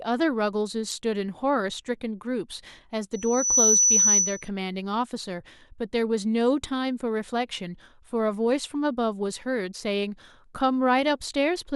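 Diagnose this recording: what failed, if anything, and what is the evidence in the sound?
At the codec stage, a compressed frame arrived with flipped bits and the decoder played it rather than concealing it. From 0.89 to 0.92 s there is a short blip of misplaced energy lasting about one frame, peaking at around -20 dBFS. Corrupted gain values or misread spectral codes sent energy to frequencies unrelated to the speech around it. The result is a brief blip of misplaced sound in the speech.

The second fault is a loudspeaker feedback squeal, an acoustic loop in the analogue path where a microphone picks up the loudspeaker it feeds. At 6 kHz the loop gain went above one, so that frequency kept reinforcing itself. From 3.13 s a 6 kHz tone rises out of the speech and reaches full strength in under half a second. It sits about 10 dB above the speech until it stops at 4.49 s.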